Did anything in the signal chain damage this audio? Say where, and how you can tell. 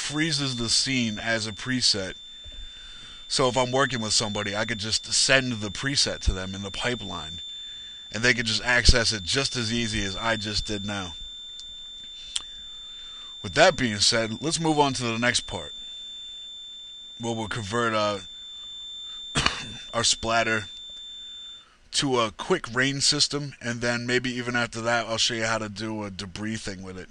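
Yes. At the analogue acoustic stage, a loudspeaker-to-microphone loop was likely held just at the edge of feedback, producing a feedback whistle: a thin, steady 3.6 kHz tone from 0.0 to 21.69 s, sitting well below the sound and swelling and fading slowly in level without running away.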